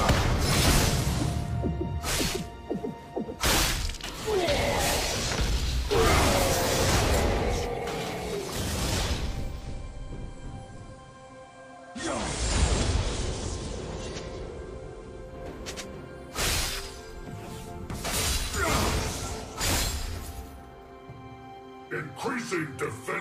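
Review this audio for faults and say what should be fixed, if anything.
Digital radio blending to analogue, from 9.47 s to 15.42 s: the receiver lost the digital stream and cross-faded over 221 ms to the FM broadcast of the same station, then faded back. During that stretch the level drops by about 4 dB and FM hiss sits at roughly 30 dB below the signal, so the sound turns quieter and noisier until the digital signal returns.

To prevent it, record from a stronger or more stable digital reception point, or capture the station from a streamed or wired source instead.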